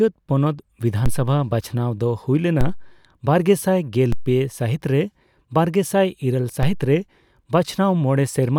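Low thumps land at 1.06, 2.61, 4.12 and 6.63 s: DC steps, where the waveform's zero line suddenly jumps by about −10 to −13 dBFS, then drains away through a 2 Hz high-pass.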